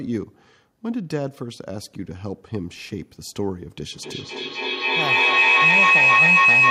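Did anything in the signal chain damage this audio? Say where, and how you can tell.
Yes. Feedback howl enters through the call path at 3.93 s and runs to the end. A tone around 3 kHz swells to about 11 dB above the speech, with the loop repeating roughly every 0.3 s. Sound is looping from loudspeaker to microphone, gaining on each trip.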